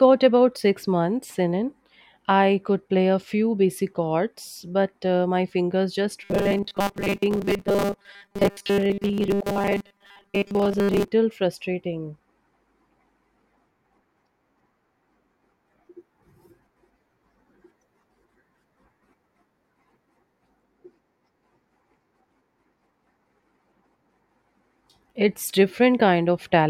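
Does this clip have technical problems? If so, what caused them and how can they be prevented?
Yes. From 6.23 to 11.08 s the speech turns into a rigid, metallic buzz pitched at 200 Hz, which is robotic sound from repeated short buffers. New audio likely arrived too late, so the same 5 ms segment was played over and over, replacing most of the real signal. Prevent it with a larger jitter buffer and a stable network and processing load.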